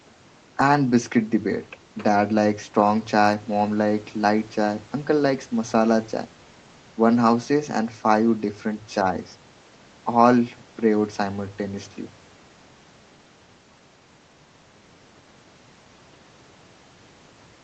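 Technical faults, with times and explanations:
Nothing here counts as a technical fault; the speech just carries the ordinary character of a call, with the microphone processing and the Opus call path leaving nothing above 8 kHz.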